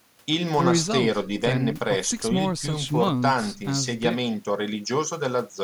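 No technical faults can be heard anywhere in this recording.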